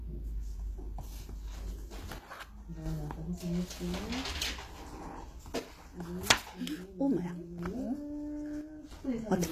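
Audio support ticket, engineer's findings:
Treble grainy and metallic throughout, nothing above 14.9 kHz, harmonics misaligned across the crossover. Likely HE-AAC compression, spectral band replication rebuilding the upper band from copied lower bands, consistent with about 24 kbps. Spectrogram: hard ceiling, blocky repeated upper-band texture.

Abrupt level drops at 2.18–2.86 s, 5.60–7.59 s and 8.61–8.91 s, about 6 dB each, with instant recovery. One channel drops out, likely a lost stereo channel in the mono sum. Waveform: sudden amplitude steps; spectrogram: bands darken uniformly across frequency.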